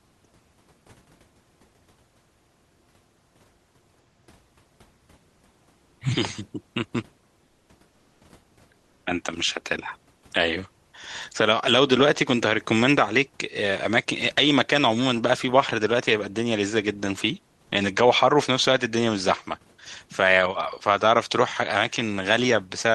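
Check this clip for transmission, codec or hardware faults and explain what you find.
Two short patches of comfort noise in place of the background, at 7.47 to 7.67 s and 8.79 to 9.03 s. In each pause the real room noise, sitting about 40 dB under the speech, gives way to a flat, featureless hiss that's about 3 to 4 dB quieter. That's likely Opus DTX: the sender goes quiet during silence and the receiver fills the gap with synthetic noise until audio resumes.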